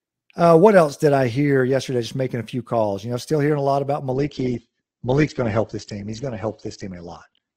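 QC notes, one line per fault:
4.11 to 7.56 s, adaptive stream at a lower bitrate: right after "hearing a lot about" the sound switches abruptly, with no gap, to a thinner texture that lasts to the end of the clip. Nothing remains above 8.2 kHz, and codec artefacts become audible. The player has stepped down to a leaner version of the stream, which fits a drop from Opus at 64 kbit/s to about 12 kbit/s.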